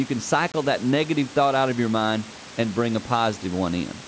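At 0.52 s a hard-edged 20 ms gap opens, and "that negative thought out" resumes slightly distorted before it soon settles. This is packet loss on an ADPCM call: about one packet became silence, throwing the decoder's predictor and step size out of step.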